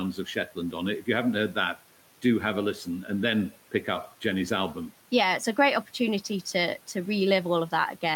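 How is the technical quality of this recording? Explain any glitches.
There is one glitch, early in the clip. Between 0.15 and 0.74 s, just before "on it", the noise suppressor cuts speech. It mistakes quiet speech for noise and pulls it down by up to about 9 dB, affecting roughly a tenth of a second in total. Those parts sound swallowed and faint rather than silent. A packet dropout, by contrast, leaves a hard gap. The room noise sits about 21 dB below the speech and belongs to the recording itself.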